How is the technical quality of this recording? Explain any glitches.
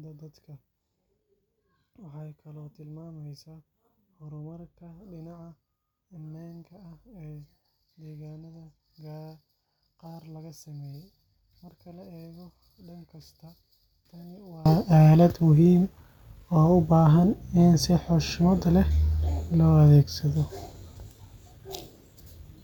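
The recording has one significant fault affecting its first two-thirds. From the start to about 14.66 s, just before "aalad muhiim", the speech is heard only as a faint residue, roughly 26 dB below its normal level. This points to one channel inverted: the likely cause is that one stereo channel carries reversed polarity, so the centred speech common to both channels cancels when summed to mono, leaving only the small difference between them.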